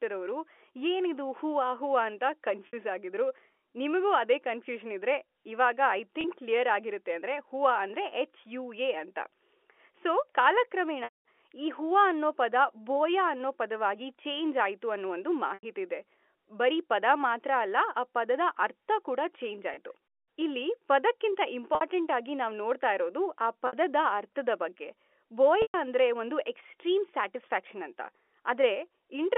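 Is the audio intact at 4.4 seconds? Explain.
Yes, the audio is intact at 4.4 seconds; the speech there comes through the G.711 telephone coding with no fault.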